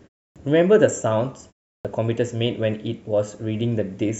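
Clipped start after a pause at 0.32 s and 1.81 s in this speech recording: after silences of 0.32 s and 0.37 s, the output device wakes late and swallows about 38 ms of each onset, so the sound begins abruptly.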